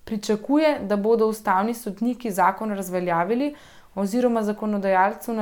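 No technical faults are audible.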